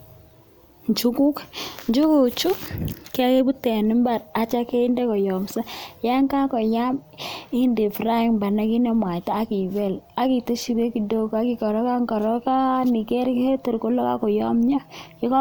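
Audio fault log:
No faults are audible anywhere in this speech recording.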